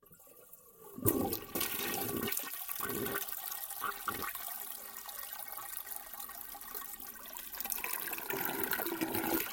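Dropped buffers (overrun) cause skips at 1.84, 3.50, 4.22, 5.80, 7.00 and 7.81 s. At each point the sound jumps forward, with no gap of silence, because a stretch of audio is simply missing and the two sides meet directly. The likely cause is the recording program falling behind, so the hardware overwrote samples before they were collected. The jumps at 3.50, 5.80 and 7.81 s are the largest, around a seventh of a second each. The one at 1.84 s is about a tenth of a second, and those at 4.22 and 7.00 s are brief, just a few hundredths.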